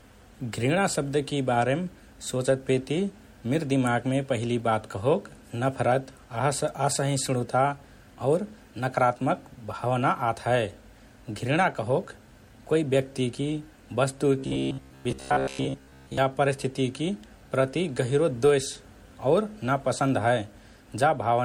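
Right from the start the speech has that swirly, hollow smear of generation loss, likely from a few rounds of MP3 coding, which fits 64 kbit/s. Nothing comes through above 16.5 kHz, and consonant attacks sound blurred because each re-encode stacked fresh quantisation noise.

From 14.39 to 16.18 s it flips into robotic sound from repeated short buffers, a rigid metallic buzz at 66.8 Hz, just before "परिस्थितिकि प्रति गहिरो". Likely the playback kept looping a roughly 15 ms chunk while most of the real audio got skipped.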